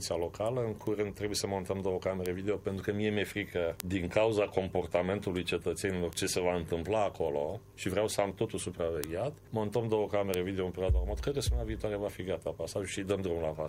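The sound has six bit error spikes, sharp broadband ticks at 0.87, 2.26, 3.80, 6.13, 9.04 and 10.34 s, each one sample, peaking between about -23 and -5 dBFS, from flipped data bits.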